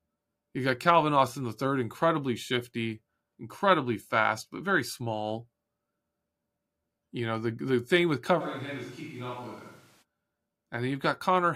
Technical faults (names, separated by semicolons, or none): switch to a distant microphone